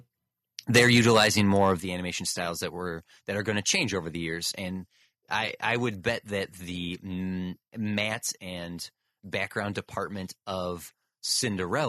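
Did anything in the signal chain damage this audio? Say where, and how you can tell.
Yes. Microphone overload from 0.74 to 1.72 s, at the converter: the loudest peaks sound flattened and crackly, likely because input gain was about 11 dB too hot, clipping a few percent of samples.

Microphone volume stepped down at 0.79 s and 1.8 s, in call processing: voice and background drop abruptly by about 4 dB, then about 7 dB, likely automatic gain control reacting to the clipping.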